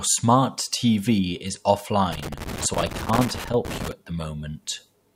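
From 2.12 s to 3.92 s the speech breaks up under loose connector crackle, ending just before "at the". A worn or dirty contact is making and breaking as it shifts, chopping the signal on and off. Unlike digital dropouts or clipping, the bursts are irregular and scratchy rather than evenly spaced or tied to loud peaks, the rough texture of a physically unstable connection.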